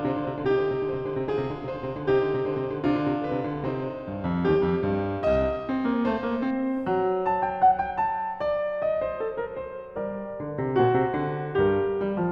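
From 0 to 6.51 s, periodic clock jitter: interference wobbles the converter's sampling clock at around 2 kHz, spraying sidebands roughly that far above and below every component of the music, strongest in the high frequencies. The result is a rough, metallic edge.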